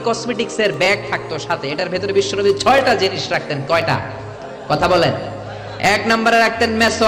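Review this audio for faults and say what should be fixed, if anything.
Periodic USB or driver dropouts are heard from 0.74 s to 6.88 s. A tick recurs every 1.02 s, about seven times. Each tick is a skipped sliver of audio, well under a millisecond. Nothing fills the gap, so the waveform jumps and clicks. The even spacing points to a background task stalling the USB bus or audio driver on a fixed schedule. To prevent it, find and disable that periodic task, or raise the driver buffer size.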